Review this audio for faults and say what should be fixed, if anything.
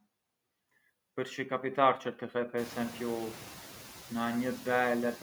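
Noise suppressor artifacts run through the whole clip. The suppressor judges which frequency bands hold steady noise and lowers them frame by frame, cutting the background by about 14 dB. The noise therefore drops away in the gaps and comes back up beneath the speech. The effect is clearer after the room noise rises by about 21 dB at around two and a half seconds, where it sits only about 17 dB below the speech. To prevent this, reduce the room noise at the source and use gentler suppression.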